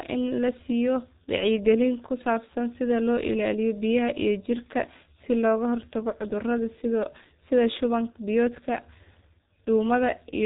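Throughout, the speech carries heavy G.723.1 codec damage. Nothing passes above 3.8 kHz, so it sounds muffled and hoarse, with smeared consonants, which fits roughly 6 kbit/s.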